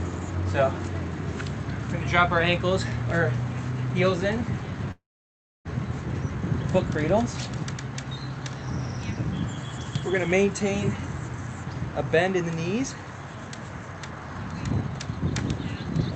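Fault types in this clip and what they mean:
Long network dropout: from 4.91 to 5.67 s the sound most likely lost its incoming packets. The receiver stretches the last sound into a short fading buzz, leaves about 0.64 s of near silence, then resumes without the missing stretch.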